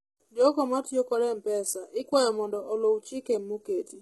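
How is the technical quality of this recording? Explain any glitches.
The recording has heavy codec damage throughout, most likely from HE-AAC compression. Only the lower spectrum is coded directly. Treble is rebuilt by copying lower bands upward under a coarse envelope, so harmonics misalign across the crossover and s sounds turn gritty, metallic or lispy. Nothing reaches above 11.8 kHz, which fits a very low bitrate around 16 kbps.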